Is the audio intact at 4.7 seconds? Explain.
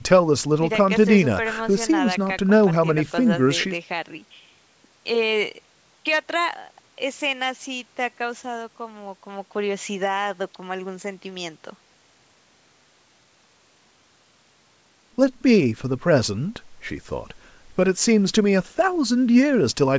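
Yes, the speech at 4.7 seconds is intact, with nothing disrupting it beyond the normal call microphone processing, which trims the lowest bass and leaves nothing above 8 kHz.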